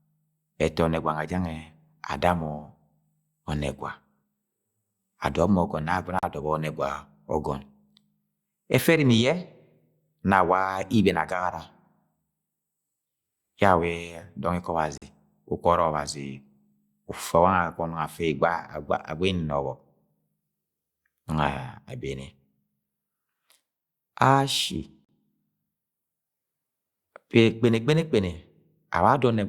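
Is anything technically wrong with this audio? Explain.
Yes. The speech has three short holes, each about 43 ms long, at 6.19, 14.98 and 25.05 s. At each one the sound cuts abruptly to dead silence and then returns. These are blocks of digital silence. Whole blocks of samples came out as zeros, most likely because the output buffer wasn't filled in time. The length fits a 2048-sample buffer at 48 kHz.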